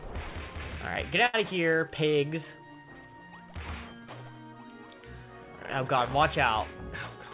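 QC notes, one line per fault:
1.26 to 1.35 s, burst of packet loss: about 80 ms is lost. The last sound is held and faded, then the audio resumes further on.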